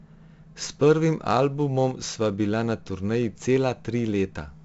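Speech runs through 4-bit ADPCM compression for its whole length, and the damage is heavy. A gritty hiss rides on every loud syllable and drops away in pauses, unlike steady background noise. Nothing sounds above 7.7 kHz, which fits a 64 kbps stream at a 16 kHz sample rate.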